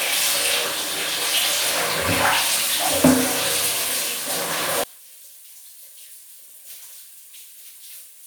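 At 4.84 s the sound drops by about 19 dB and stays faint until the end, with the shared content largely gone. The likely cause is one channel inverted: one side's polarity is reversed, so whatever both channels share cancels when summed to mono, leaving only their difference. On a waveform the mono envelope shrinks sharply from 4.84 s onward. A spectrogram shows energy thinning across all bands, with only faint residual energy left.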